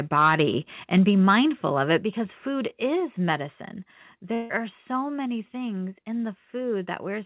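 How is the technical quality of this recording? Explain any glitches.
The recording has three kinds of fault: clipped peaks, a series of sudden level drops, and one gap in the audio, all carried over a narrowband call path with nothing above 4 kHz, which fits a G.711 telephone codec.

Microphone overload occurs from 0.17 to 0.42 s and again from 1.29 to 1.35 s. The input was likely set too hot, so speech peaks exceeded the converter's full scale by about 6 dB in the first stretch and about 2 dB in the second. A few percent of samples were flattened at the limit. The squared-off tops give the loudest syllables a harsh, crackling edge, stronger in the first event.

The microphone volume stepped down four times: at 0.98 s by about 2 dB, at 1.98 s just before "because food" by about 5 dB, at 3.00 s just after "because food" by about 2 dB, and at 5.04 s just before "many things in" by about 1 dB. 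The likely cause is the call software's automatic gain control reacting to the clipping and cutting the device's input level in discrete steps. Voice and background drop together at each point. The 1.98 s step is the largest.

A long network dropout runs from 4.34 to 4.52 s, with about 160 ms of audio missing. The receiver likely concealed the loss by extending the last received sound for about 155 ms, so the gap comes out as a fading, buzzy continuation rather than silence. Speech then resumes further on, and the lost portion never plays.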